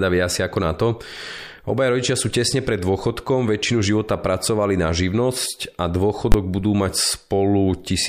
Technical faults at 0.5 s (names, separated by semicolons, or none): none